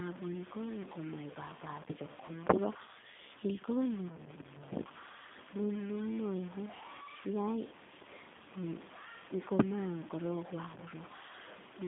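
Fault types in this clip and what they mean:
Low bit depth without dither: A coarse, gritty distortion rides on the speech throughout. It swells and shrinks with the sound, and is most exposed in quiet stretches. It is likely caused by truncating the samples to very few bits with no dither, which fits a 7-bit word length. The error sits only about 15 dB below the signal. On a waveform, quiet passages show visible staircase steps. On a spectrogram, the grit appears as broadband hash that follows each syllable rather than a steady noise floor.
G.729 codec: The speech has the thin, slightly rough, synthetic character of a low-rate telephone codec. It is rebuilt from a vocal tract model, a pitch predictor and a handful of pulses per frame, which fits G.729A at 8 kbit/s. Here the coding damage is plainly audible. On a spectrogram, energy is confined to a band from 150 Hz to 3.6 kHz, with nothing above it, and the harmonics look smeared from frame to frame.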